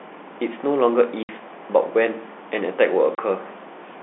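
Packet loss filled with silence cuts the speech at 1.23 s, a 60 ms hole, and again at 3.15 s, a 30 ms hole. Audio packets failed to arrive, and the receiver played silence in their place. The two gap lengths point to 30 ms packets, two lost and then one. Each hole drops abruptly to nothing and back, with hard edges set against the band-limited telephone sound of the G.711 line.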